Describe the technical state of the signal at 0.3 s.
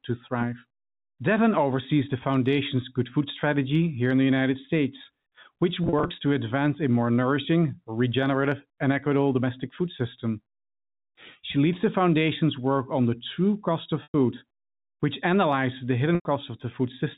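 At 0.3 s the speech is intact, carried by G.711 telephone coding whose upper limit of 4 kHz and faint level-following quantisation noise are simply the normal character of that path.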